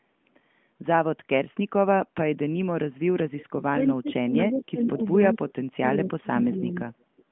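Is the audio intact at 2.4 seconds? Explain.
Yes, the audio is intact at 2.4 seconds, with no fault at that moment.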